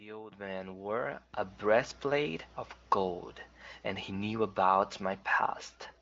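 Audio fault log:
No faults found; the speech carries the bandwidth of the AMR wideband (HD Voice) codec, with nothing above about 7.6 kHz and no audible roughness, which fits one of its higher rates.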